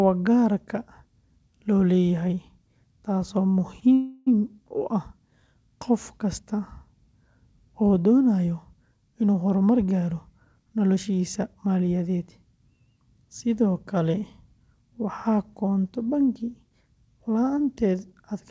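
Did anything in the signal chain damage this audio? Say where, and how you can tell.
Yes. At 3.80 s a sound is held about 18 ms too long with a slight buzz or dip. This is a short stall from a late packet: the jitter buffer ran dry and the receiver stretched the last sound. Unlike a dropout, nothing is lost and it resumes seamlessly.

From 3.94 to 4.29 s the sound turns into a fading buzz or hiss lasting 328 ms, never reaching silence, then carries on from the same point. This call audio freeze likely comes from packets held up on the network. A true cut would skip audio; this one inserts it.

Between 9.21 and 10.97 s the sound runs at 111% speed while its pitch stays the same, and roughly a fifth of a second is trimmed. This is a jitter buffer speed-up, removing pitch-period slices to shed backlog. A resampling fault would also raise the pitch. The G.722 path, with nothing above 8 kHz, is not at fault.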